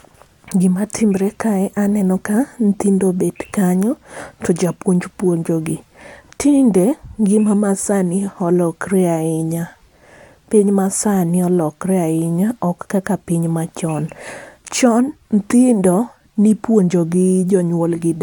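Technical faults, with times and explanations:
No technical faults heard.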